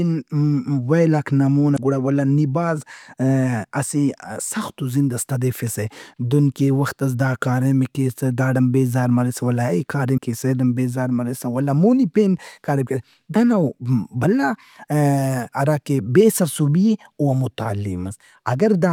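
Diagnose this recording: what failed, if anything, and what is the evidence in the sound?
The codec stage failed, from damaged data in a compressed stream. A short disruption at 1.74 to 1.79 s, between "ویلاک نا" and "گڑا ولدا", and another at 10.14 to 10.19 s each interrupt the speech for about 50 ms. Corrupted bytes made the decoder misread frames, lose sync and hunt for the next valid header.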